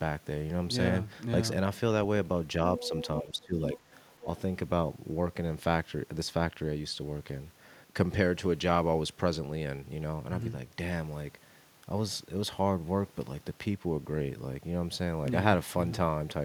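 From 2.77 to 3.04 s the other side's voice leaking through is audible, roughly 10 dB under the talker, likely residual loudspeaker echo the canceller failed to remove. It returns faintly, around 20 dB down, from 4.12 to 4.24 s.

Speech suppressed in double talk overlaps the first leak: from 2.81 to 2.92 s the talker dips slightly, a few dB. From 3.22 to 3.56 s the drop is much deeper, near 20 dB, likely the canceller attenuating everything while both sides spoke at once.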